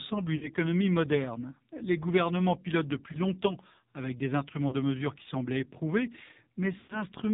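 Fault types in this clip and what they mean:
AMR narrowband mobile codec: Heavy coding at 5.9 kbps strips everything above 4 kHz, leaving the speech muffled, buzzy and noticeably synthetic throughout.
Lost AMR speech frames: Dropped frames make the decoder repeat fading settings. Brief warbles occur after "gouvernements pilotent depuis" and "longtemps avec des instruments"; longer fades near 0.4 and 6.8 seconds.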